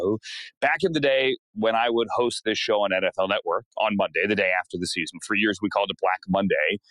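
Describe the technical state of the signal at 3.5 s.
A speech-tuned noise suppressor is running on this sound throughout, treating held tones and tails as noise, so at 3.5 s levels pump by roughly 5 dB.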